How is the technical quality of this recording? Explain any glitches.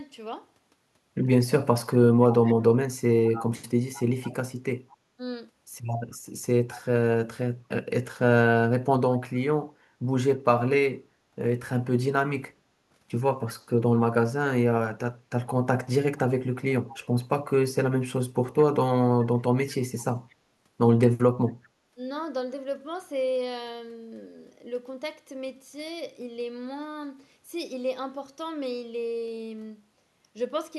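The main glitch is a faint delayed double of the speech, trailing it by about 210 ms. It appears from 2.22 to 2.55 s (about 25 dB below the speech), 3.27 to 4.34 s (loudest, about 15 dB down), 6.12 to 6.18 s (about 35 dB down), 16.9 to 16.98 s (about 25 dB down) and 20.01 to 20.35 s (about 30 dB down). This is echo leak. Its likely cause is a loudspeaker at one end whose echo canceller failed to remove all of the replayed audio its microphone picked up, so some went back down the line.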